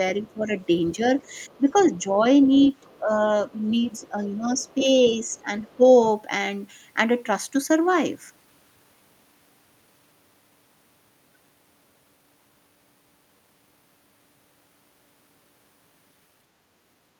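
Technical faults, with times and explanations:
0.24 to 3.0 s and 3.69 to 5.76 s: other side's voice leaking through. A second, faint voice sits behind the talker. It is about 25 dB down in the first stretch and fainter, around 35 dB down, in the second. The likely cause is a loudspeaker playing the far end into the microphone, with the echo canceller leaving a residue. That residue comes through as a quiet voice underneath the talker.
0.26 to 1.0 s, 1.57 to 2.1 s and 2.99 to 5.82 s: speech suppressed in double talk. The talker's voice dips while the far side is also sounding. The dips reach roughly 10 dB. They cover about 0.2 s and 0.3 s in the first two spans and about a second in total in the third. This is likely the echo canceller failing to separate the two voices and turning the whole signal down. The talker's voice dips in pieces as a result.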